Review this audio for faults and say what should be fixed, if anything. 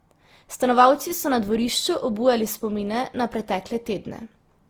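Throughout the speech, the sound is swirly, smeared and hollow, with blurred consonant attacks, more damage than one encode at this quality would leave. This is likely generation loss. It sounds like roughly five lossy passes, consistent with Opus at 48 kbit/s, each requantising on a shifted frame grid so that noise accumulates. Keep a lossless master through every editing and transfer stage and encode to the lossy format only once, at the final delivery step.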